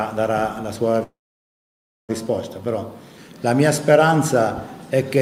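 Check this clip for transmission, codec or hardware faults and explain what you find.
A single fault is present: a call audio freeze from 1.03 to 2.11 s. The sound breaks into a brief fading buzz, then drops to near silence for about 0.95 s before picking up where it stopped. No content is lost, but everything after it lands about 1.05 s late. The likely cause is packets held up in transit, draining the jitter buffer so the receiver could only stretch the last sound until delivery resumed.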